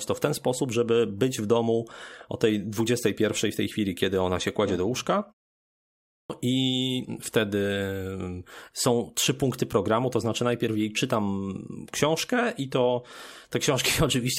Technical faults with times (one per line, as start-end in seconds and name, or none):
6.11-6.30 clipped start after a pause